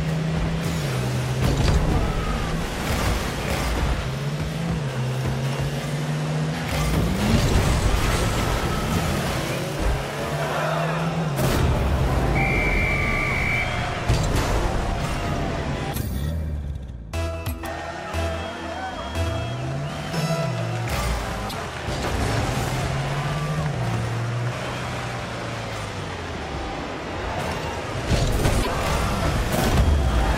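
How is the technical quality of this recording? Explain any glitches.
The recording has two short glitches, both from damaged data in a compressed stream. At 21.46 s and again at 28.59 s, each lasting about 80 ms, corrupted bytes make the decoder misread frames and lose sync, producing a brief chirp, squawk, click or short hole.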